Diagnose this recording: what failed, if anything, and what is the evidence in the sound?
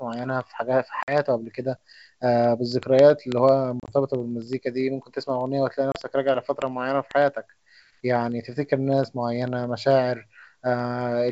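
Word clock ticks, at the digital interface between converter and receiver, run from 0.14 s to 11.29 s. Sharp ticks recur about twenty times a second, roughly two hundred in all. The receiver runs on its own clock, off by roughly 400 ppm, so each slip drops or repeats one sample.

Packet loss on an ADPCM call, in the network stage, leaves hard-edged silences at 1.03–1.15 s (50 ms lost), 3.80–3.93 s (60 ms across 80 ms, longest run 30 ms) and 5.92–5.99 s (30 ms). Afterwards the decoder's predictor and step size no longer match the sender's, so speech resumes with brief distortion.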